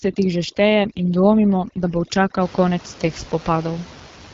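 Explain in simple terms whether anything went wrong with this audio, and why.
Two things went wrong here. For the first couple of seconds, from the start to about 2.41 s, just before "konec teh", there's overdone noise removal. A noise reduction step was pushed too hard, so it squashed not only the room noise but also the quieter bits of the voice. That's why the background drops to an odd near-silence with little twinkly specks. After that point the room noise comes back as a normal low background.

The whole clip also went through the AMR wideband (HD Voice) codec, the kind used for phone calls. It rebuilds the voice from a simplified model instead of keeping the actual sound, and the rough, raspy grain you hear all the way through fits one of its lowest quality settings. The top end is cut off too, with nothing above about 7.5 kHz, which gives the voice that dull, phone-like ceiling.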